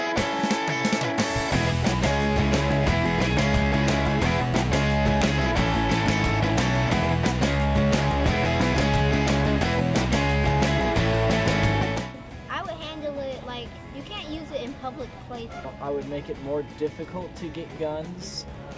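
A file header played as audio at 5.22 s: a joined piece kept its header bytes, which play as samples and give one sharp, loud click.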